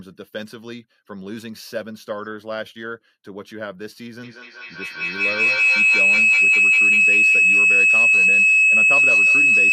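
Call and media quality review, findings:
Feedback howl, 4.23 s to end of clip. Tone near 3 kHz builds, repeating roughly every fifth of a second, peaking about 15 dB above speech. Probable component: two devices in one room on the same call, mic-to-speaker loop with gain above unity. Unlike acoustic echo, repeats grow rather than decay and collapse into a single pitched tone instead of recognisable copies of the sound. Unbroken until clip ends.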